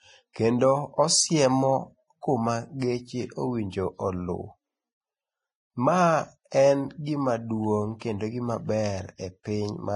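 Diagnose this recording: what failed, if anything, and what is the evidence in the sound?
Vorbis compression runs throughout, a codec-stage fault. Nothing survives above 10.5 kHz, and heavy damage leaves the speech grainy and hissy. The likely cause is low-quality Vorbis coding, fitting a bitrate near 24 kbps, which quantises the treble so coarsely that fine detail becomes noise.

Pre-echo sits from 0.33 to 0.36 s as a 26 ms smear of hiss just before an attack, also from the codec. The transform spreads its quantisation noise across a whole block, so noise sized for the loud onset fills the quieter moment ahead of it.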